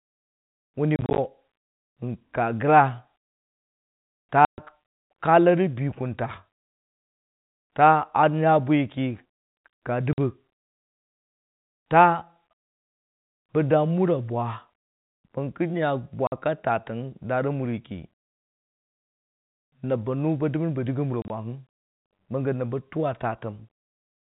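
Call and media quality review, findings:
Packet loss filled with silence: hard-edged dropouts at 0.96–1.18 s (broken holes), 4.45–4.58 s, 10.13–10.18 s, 16.27–16.32 s, 21.22–21.30 s. Loss of 50–130 ms per event, multiples of 10 ms, fitting 10 ms packets. Receiver inserts silence. G.711 narrowband path intact.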